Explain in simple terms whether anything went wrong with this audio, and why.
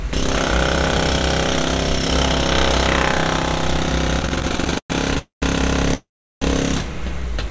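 Between 4.19 and 5.17 s the sound has repeated stalls (stutter). Packets were reaching the receiver late or more slowly than they were being played, so its small holding buffer kept running dry. Each time, the receiver stretched out the last bit of sound to cover the wait. You hear about 18 little hiccups, the longest about 0.12 s, filling roughly a third of that second. Nothing is lost, but the sound drags and jerks.

Right after that come two call audio freezes, at 5.18 to 5.43 s and 5.94 to 6.42 s, likely caused by packets being held up on the way so the buffer emptied completely. The receiver carried the last sound on as a fading buzz, which then dies to silence, for about 0.13 s in the first freeze and 0.36 s in the second. When the packets arrive, the sound picks up exactly where it stopped, so it is delayed rather than cut. The call link itself carries nothing above 8 kHz.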